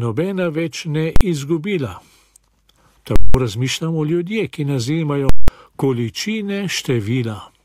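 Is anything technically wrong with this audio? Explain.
Yes. A single hard bang hits at 1.16 s, and at 3.16 to 3.34 s and 5.29 to 5.48 s there is a violent pop, dead silence, then another pop. These are invalid numbers at full scale: a calculation produced infinite or invalid values that pinned the output at one extreme value for a whole block. The first block lasts about 46 ms, which fits a 2048-sample block, and the later two last 186 ms each, which fits 8192 samples.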